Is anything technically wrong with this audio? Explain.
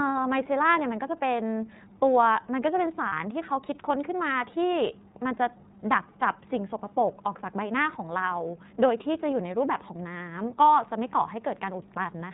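Yes. The speech has two problems.

Throughout, the iLBC codec limits the audio. It is narrowband, so nothing above 4 kHz survives. The roughness is plainly audible, with a dull, slightly synthetic edge. The sound fits the 13.33 kbps mode with 30 ms frames.

From 3.08 to 3.12 s, there are lost iLBC frames. The decoder filled the gap by repeating the last pitch cycle mixed with noise. It sounds like a brief held, buzzy vowel. The length fits one lost 30 ms frame. Each frame stands alone, so the speech recovers almost at once.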